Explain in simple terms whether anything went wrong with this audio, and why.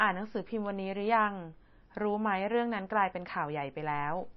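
MP3 compression is the likely cause of the damage heard throughout: the speech sounds watery and swirly, with everything above about 5.8 kHz missing, so s sounds lose their crispness.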